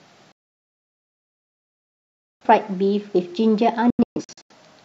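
At 0.32 s the speech cuts to silence through a 3 ms fade and returns at 2.45 s. This is a digital broadcast dropout: the receiver muted on lost or corrupt frames, so roughly 2.1 s of programme is gone. From 3.90 to 4.55 s, shorter holes scatter, totalling about 0.38 s, the longest 128 ms.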